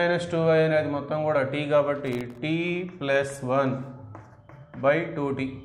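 Processor overload crackle runs from 2.07 to 2.38 s: around twenty very short buffers, each under a millisecond, miss their deadlines and drop to silence, tearing the sound into gritty crackle.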